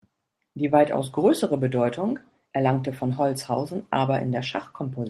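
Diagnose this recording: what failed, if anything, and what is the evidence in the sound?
Lost packets rebuilt from error correction at 0.63–0.73 s, just before "weitaus größere", and at 1.57–1.59 s, just after it. After these network losses, the Opus decoder played low-bitrate copies from the following packets. There is no gap, only briefly rougher, noisier speech.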